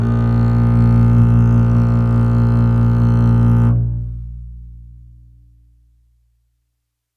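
No technical faults can be heard anywhere in this music clip. There are no glitches, gaps or sudden changes to point to at any moment.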